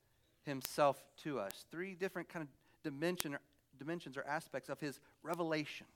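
A speech clip with four sharp ticks, each a bit error spike. They fall at 0.65 s, 1.51 s just before "three different kind of", 3.20 s just before "or dimensions or aspects", and 5.34 s after "dimensions or aspects of". Peaks reach about -9, -15, -9 and -21 dBFS. Each is a broadband click unrelated to the speech, which fits a single flipped bit throwing one or two samples off by a power of two.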